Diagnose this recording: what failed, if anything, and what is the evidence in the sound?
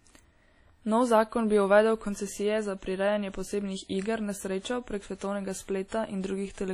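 Washy, ringing speech with hiss breathing alongside it throughout, nothing above 19.6 kHz; at the codec stage, likely heavy WMA compression, consistent with about 32 kbps.

Pre-echo at 5.88 s, just after "prek svetovnega": a 39 ms hiss smears ahead of an attack, as the codec block spreads loud-part noise into the preceding quiet.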